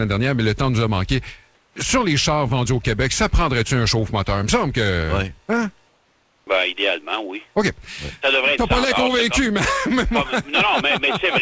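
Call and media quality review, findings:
Comfort noise in place of the background at 1.55–1.76 s and 5.87–6.47 s: the real background is replaced by steady, featureless noise, about 1 dB and about 2 dB quieter. Likely sender-side discontinuous transmission, with the receiver synthesising noise across the gaps.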